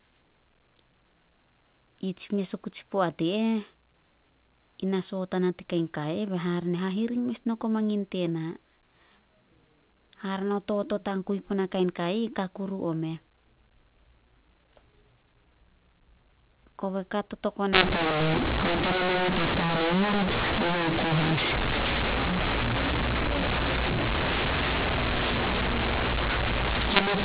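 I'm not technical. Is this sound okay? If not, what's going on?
No. From 17.73 s to the end, the speech turns harsh and gritty, with hiss in the pauses. This is mu-law and A-law mixed up: A-law phone audio decoded as mu-law.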